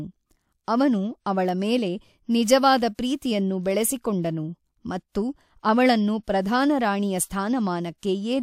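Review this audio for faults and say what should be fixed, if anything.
No faults; nothing needs fixing.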